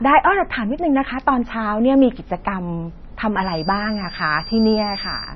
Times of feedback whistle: 3.36-5.36

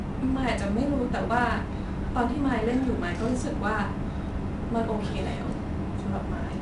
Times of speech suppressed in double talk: none

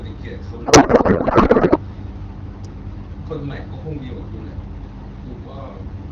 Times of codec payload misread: 0.65-1.78

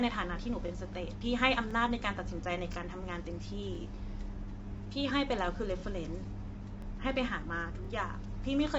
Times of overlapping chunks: 0.68-0.71, 1.71-1.73, 2.73-2.75, 3.75-3.78, 4.78-4.80, 5.80-5.82, 6.82-6.85, 7.85-7.87

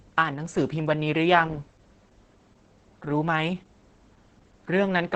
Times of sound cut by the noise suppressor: none

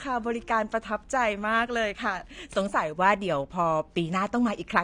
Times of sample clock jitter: 0.52-4.84

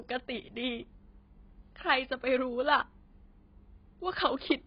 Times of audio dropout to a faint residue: none

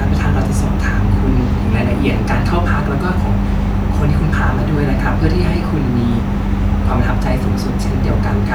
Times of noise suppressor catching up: none

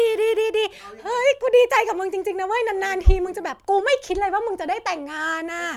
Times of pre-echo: none

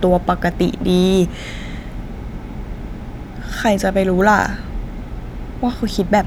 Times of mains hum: none

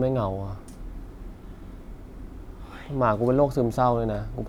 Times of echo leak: none

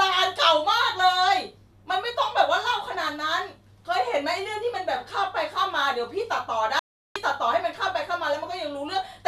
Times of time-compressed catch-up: none

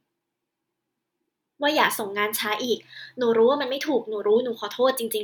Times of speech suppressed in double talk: none

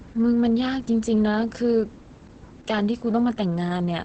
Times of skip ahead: none

